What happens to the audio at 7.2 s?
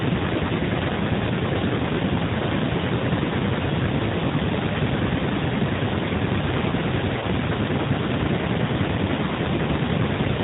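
VoIP packet loss concealed by the speech codec occurs from 7.19 to 7.25 s. About 30 ms of audio went missing, which fits three lost 10 ms G.729 frames. The decoder filled the gap by repeating its last pitch period and vocal tract filter at falling gain. The speech briefly turns into a fading buzzy or coloured tone. Because each frame builds on the previous one, the voice stays weak or distorted for a short while after the gap. The 8 kbit/s G.729 coding throughout the clip keeps the whole passage band-limited below 4 kHz and a little rough.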